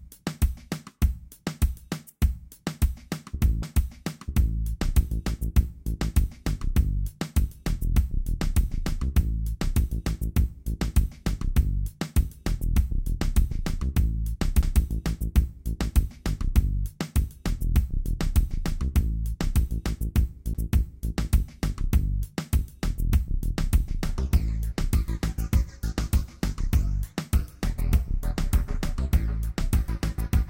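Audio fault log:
3.63 s, 14.62 s, 20.54 s, CD skip: a tiny tick and a brief dropout of a few milliseconds, about 10 ms at the last, after which the sound resumes from a different point. A jolt or disc flaw made the laser jump to another track turn.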